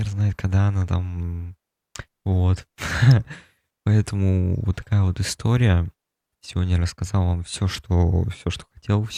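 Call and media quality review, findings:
Electrical switching spike at 3.11 s: a sharp snap riding on top of the speech, peaking somewhere around -15 dBFS. Likely a nearby switch, relay or motor arcing and getting picked up on the audio line as a brief burst. Worth checking grounding and cable routing.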